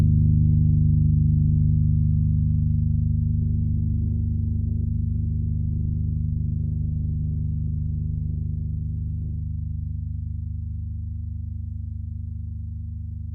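From 3.41 s to 9.41 s the adaptive stream drops to a lower bitrate. Codec artefacts rise, which points to a step down from about 64 to 16 kbit/s Opus. Unlike a dropout, the switch is abrupt in both directions with no gap.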